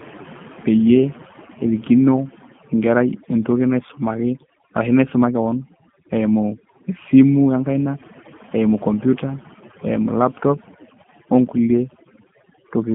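Overdone noise removal runs throughout this speech clip: a noise reducer set far too aggressively is pulling individual frequency bands down or out whenever they sit close to its noise estimate, so the background collapses into near silence dotted with twinkling specks, and the softer parts of the voice are dragged under with it. A G.729 codec is also present throughout, and its damage is plainly audible. The speech is squeezed into a telephone band of roughly 150 Hz to 3.4 kHz, with nothing at all above 3.4 kHz, and has the slightly rough, synthetic texture of a coder that rebuilds each short frame from a vocal tract filter, a pitch predictor and a few pulses rather than from the waveform itself, which fits an 8 kbit/s G.729A link.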